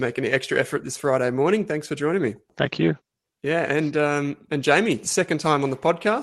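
Nothing stood out on listening to this speech, which carries the slightly band-limited character expected of a call path topping out around 12 kHz.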